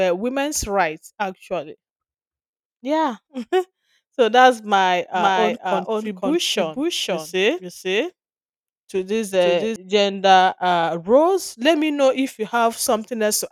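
From 5.14 to 9.76 s, after "so that's my", a doubled audio track: a dry second copy trails about half a second behind at roughly equal level, likely from a second capture path, ending abruptly before "gender uh roles".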